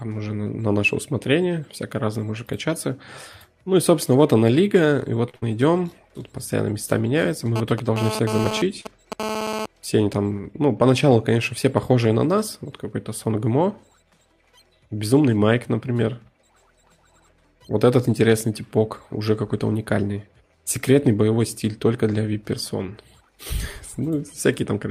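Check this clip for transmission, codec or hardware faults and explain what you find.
Five faults are audible, clustered around 5 s and 8 to 9 s, with one more near 18 s.

Short stall from a late packet, 5.29 to 5.36 s: the jitter buffer ran dry and the last sound was held for 42 ms. This shows as a flat, smeared band on the spectrogram.

Burst of packet loss, 5.36 to 5.44 s: 60 ms was lost and concealed by a fading continuation. It sounds like the last sound held and dying away, seen as a decaying envelope before the audio jumps ahead.

GSM phone buzz, 7.56 to 9.66 s: radio bursts from a nearby phone, rectified at about 217 Hz, produce a raspy buzz about 6 dB below the signal. It comes and goes, as a data transfer would. The spectrogram shows evenly spaced harmonic lines.

Short concealed packet loss, 8.81 to 8.87 s: 40 ms went missing and was filled with extrapolated sound. It is heard as a brief smear, with a blurred patch.

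Jitter buffer speed-up, 17.83 to 18.22 s: pitch-period chunks totalling about 40 ms were cut to reduce delay. The sound runs about 8 percent fast at unchanged pitch, and the time axis looks compressed.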